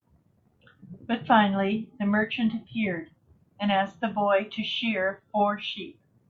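Speech recording, with no technical faults audible.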